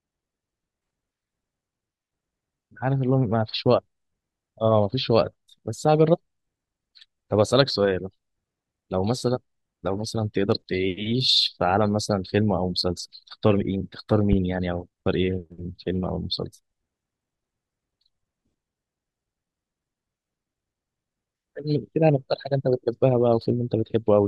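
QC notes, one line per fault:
14.33 to 14.35 s, loud pop: a single sharp thump jumps well above the speech level for under 30 ms, likely a voltage spike from a plug, switch or static discharge. The speech continues unbroken beneath it, which separates it from a dropout or edit click.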